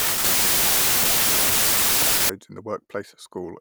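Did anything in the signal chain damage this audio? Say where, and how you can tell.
Yes, at the sample-format conversion stage. From 0 to 2.29 s the speech is buried under loud noise, running 1.33 times too fast and pitched up. That's a wrong sample width: packed 24-bit samples were read as 32-bit, so each value mixes bytes from neighbouring samples.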